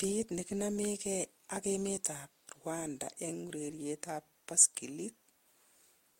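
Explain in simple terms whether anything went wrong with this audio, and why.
Nothing went wrong here.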